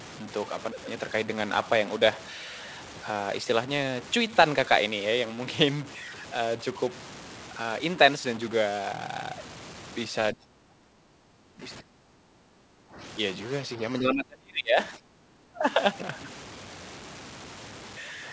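A stuck bit distortion runs through the whole speech recording, and the pauses carry a steady noise floor rather than silence. That noise in the gaps separates it from clipping, which only roughens the loud peaks. Its likely cause is one data line held at a fixed value. The talker's level dips in four places: 10.33 to 11.63 s (about 25 dB at its deepest), 11.81 to 12.99 s (about 15 dB), 14.03 to 14.78 s (about 35 dB) and 14.97 to 15.62 s (about 20 dB). These are likely speech suppressed in double talk by an echo canceller. Nothing is heard above 8 kHz, which fits the G.722 call path at 64 kbps.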